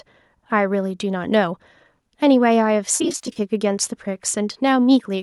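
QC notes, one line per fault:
2.97–3.40 s, AAC frame loss with concealment: about 200 ms of audio is missing in short bursts spread over 420 ms, none much longer than a few tens of milliseconds. The decoder fills each gap from the last good spectrum, so the speech turns smeared, noisy and phasey rather than dropping out. The light graininess of the likely low-delay AAC path carries on around it. On a spectrogram, harmonics blur into flat noisy patches. The waveform shows slightly dipped, irregular envelopes.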